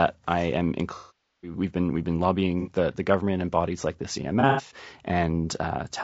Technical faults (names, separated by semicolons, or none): low-delay AAC compression; AAC frame loss with concealment